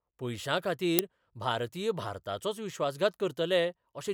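An uninitialised buffer plays at 0.99 s: a block of memory went to the output before any audio had been written to it, so leftover values were read as samples. It produces a very short, loud crack, about 1.5 ms long, which fits a 64-sample buffer.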